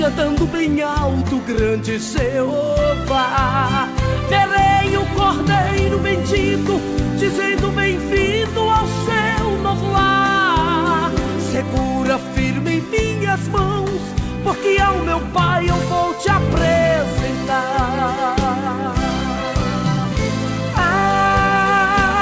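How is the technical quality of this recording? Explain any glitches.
No glitches can be heard anywhere in this recording. It has come through a call path, and nothing reaches above 8 kHz, which fits a wideband call codec such as G.722.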